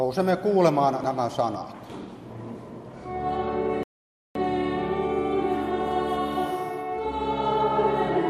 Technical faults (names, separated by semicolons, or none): dropped buffer (overrun); rebuffering stall